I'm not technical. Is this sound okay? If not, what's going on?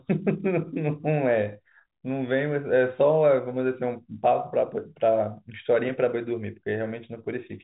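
Yes, nothing has gone wrong with this speech recording. It has the narrower sound of an ordinary landline call, because G.711 telephone coding carries nothing above about 3.8 kHz, and that is how a phone line is meant to sound.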